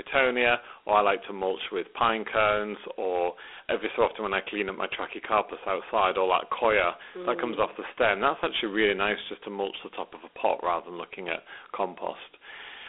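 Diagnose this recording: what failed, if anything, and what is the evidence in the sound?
Dialogic VOX ADPCM throughout, a codec-stage fault: speech confined to 300 Hz–3.5 kHz, nothing above 4 kHz, with gritty hiss from coarse 4-bit steps, fitting 32 kbit/s.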